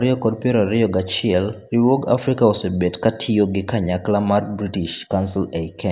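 Speech recording, no technical faults heard.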